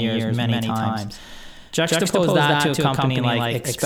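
From start to finish, every syllable of the speech is followed by an equally loud copy about 150 ms later, giving a stuttering, slapback effect with no room tail or softening on the repeat. This is a doubled audio track: the same signal is most likely reaching the mix twice, once directly and once through a slower path or an edit that left two copies out of step.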